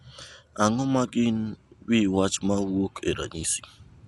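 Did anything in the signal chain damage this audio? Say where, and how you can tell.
Yes. Dolby Digital compression, likely, runs through the whole speech clip at the codec stage. Nothing survives above 11.6 kHz, and a rough, fluttering noise clings to the voiced sounds. That fits a starved encoder near 64 kbps narrowing the band and dither-filling lines it left without mantissa bits.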